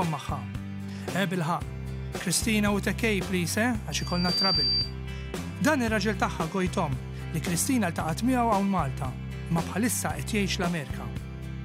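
Loudspeaker feedback squeal, 3.91 to 4.95 s. The mic-speaker loop rings at 4.7 kHz, swelling in half a second to about 5 dB over the sound.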